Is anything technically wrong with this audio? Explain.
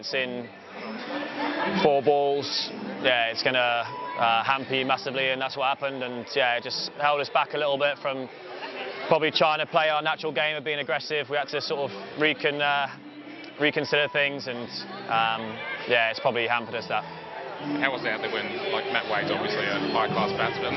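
No, the signal holds steady throughout, with nothing in its level, timing or continuity that points to a technical problem.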